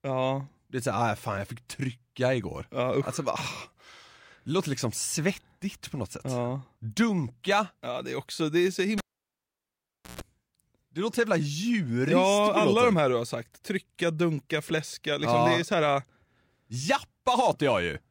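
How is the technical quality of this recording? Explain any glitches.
The recording has one clear glitch, a cable pulled and plugged in, from 8.98 to 10.21 s, right after "också det är så". A live lead comes out, giving a pop and about 1.18 s of near silence. During reinsertion, the bare tip contacts first, producing a 139 ms burst of 60 Hz mains buzz before a second pop restores the speech.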